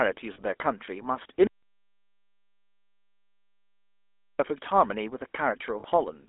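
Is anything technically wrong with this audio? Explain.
Yes, three kinds of fault are audible.

Throughout the clip the speech has a buzzy, gravelly roughness and a narrow, telephone-like band running from about 250 Hz up to only 3.5 kHz, with nothing higher. That is the GSM full-rate codec. It rebuilds speech from a model of the vocal tract driven by a coarse, regularly spaced pulse excitation. The plainly audible grain fits the 13 kbps full-rate coding.

At 0.34 to 0.40 s, and again at 5.80 to 5.85 s, the sound briefly freezes into a short, rough metallic ring lasting about 40 ms each time. These are lost GSM frames. When a frame fails, the decoder reuses the settings of the last good one at a falling level, so the sound hangs on instead of moving forward. The length of each event fits two 20 ms frames.

From 1.47 s to 4.39 s the speech cuts out abruptly into silence, with no room tone at all, and then resumes in mid-flow. 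This is an audio dropout to silence lasting about 2.9 s, and whatever was said during the gap is gone. The likely cause is that the input signal was lost, through a disconnected device, a failed link or a stray mute, while the recorder kept writing silence.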